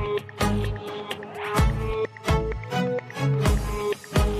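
No technical fault can be heard anywhere in this audio. Nothing in the sound calls for a fix or points to a problem in how it was captured or carried.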